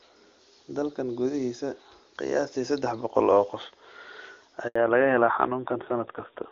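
Speech carried over an HD Voice call runs clear and wideband at first, with the AMR wideband coding leaving faint or no damage at what sounds like its top rate, around 23.85 kbit/s. At 4.67 s a handover gap cuts the audio to silence for 80 ms, until 4.75 s, as the call switches networks and no speech frames arrive. The voice dies away within a few tens of milliseconds and then resumes, unlike a dropout from packet loss, which tends to leave repeated or smeared fragments. From 4.75 s to the end comes a fallback to narrowband. Nothing survives above 4 kHz, so the voice turns duller and rougher, which fits a switch to AMR narrowband at about 7.4 kbit/s. The bandwidth loss persists for the rest of the call instead of fluctuating, which separates it from a momentary low-pass effect or from a lowered bitrate within the wideband codec.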